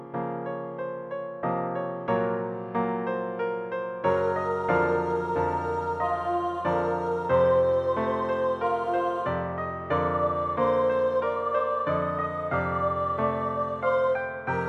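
Nothing is technically wrong with this audio.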